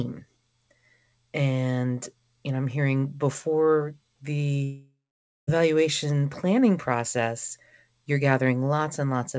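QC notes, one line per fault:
4.64–5.50 s: long network dropout. Speech trails into a fading buzz, then 0.54 s of silence, and 0.84 s is lost, likely because packets stopped arriving.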